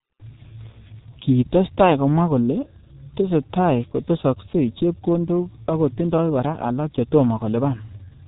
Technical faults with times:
0.00-8.27 G.723.1 codec

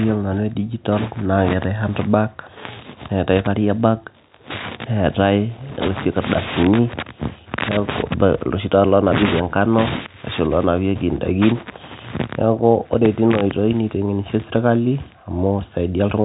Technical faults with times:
none

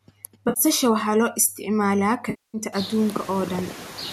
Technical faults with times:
0.00-4.13 noise suppressor artifacts
0.48-0.60 AAC frame loss with concealment
2.29-2.58 AAC frame loss with concealment

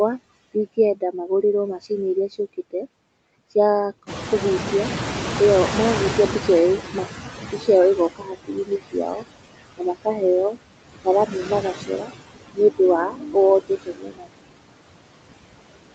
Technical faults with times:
0.00-15.95 noise suppressor artifacts
4.06-8.12 noise suppressor catching up
7.45-7.68 speech cut by the noise suppressor
8.16-9.24 speech cut by the noise suppressor
9.77-10.22 speech cut by the noise suppressor
11.26-12.79 speech cut by the noise suppressor
13.09-13.36 speech cut by the noise suppressor
13.61-14.71 speech cut by the noise suppressor

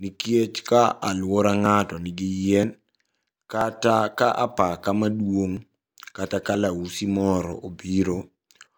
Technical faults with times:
0.68 audio missing between chunks
1.66 audio missing between chunks
2.63 audio missing between chunks
3.61 audio missing between chunks
4.59 audio missing between chunks
5.57 audio missing between chunks
6.55 audio missing between chunks
7.53 audio missing between chunks

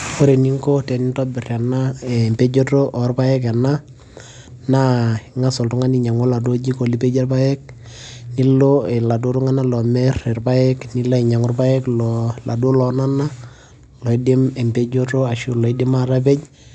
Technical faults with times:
none

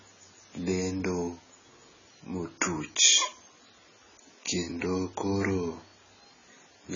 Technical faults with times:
0.00-6.96 AAC compression

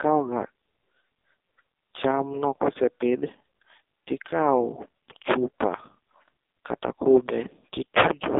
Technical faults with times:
0.00-8.39 AMR narrowband mobile codec

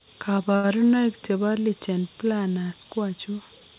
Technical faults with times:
0.56-0.67 short stall from a late packet

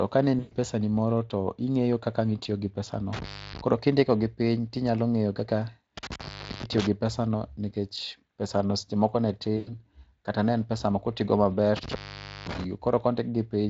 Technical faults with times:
0.39-0.53 VoIP packet loss concealed by the speech codec
2.43-2.47 VoIP packet loss concealed by the speech codec
3.13-3.61 intermittent contact
5.97-6.87 intermittent contact
9.57-9.72 VoIP packet loss concealed by the speech codec
11.77-12.64 intermittent contact

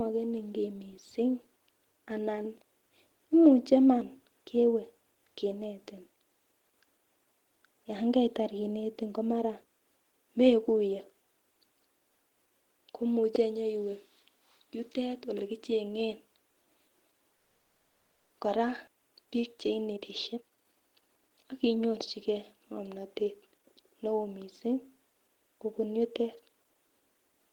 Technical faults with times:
17.35-18.32 call audio freeze
18.86-18.89 skip ahead
19.81-21.80 jitter buffer speed-up

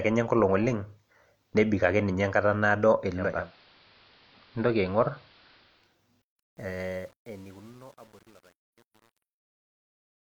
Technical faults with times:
3.05-6.00 digital radio blending to analogue
6.22-10.28 truncation distortion on a fade

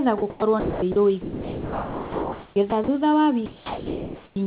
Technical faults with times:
0.18-0.96 sound dropped by the voice detector
1.22-2.88 sound dropped by the voice detector
3.46-4.36 sound dropped by the voice detector

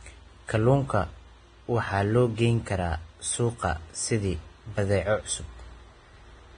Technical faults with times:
0.00-6.57 transcoding between lossy codecs

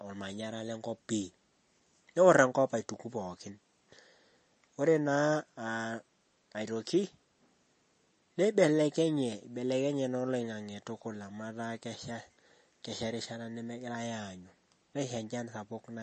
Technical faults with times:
0.00-16.02 MP3 compression

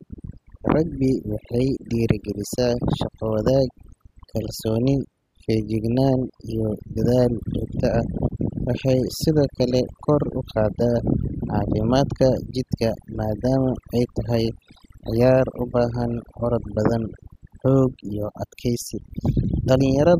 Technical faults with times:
0.00-20.20 overdone noise removal

